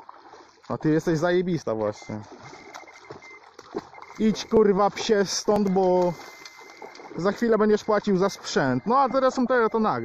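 At 0.63–0.65 s, 4.57–4.59 s, 5.56 s, 6.54–6.56 s and 7.54 s there's an overlap between stream segments. Neighbouring one-second chunks claim the same time, so the player trims 6 to 20 milliseconds of real audio. The waveform jumps, and you hear a small click or skip at each of these points.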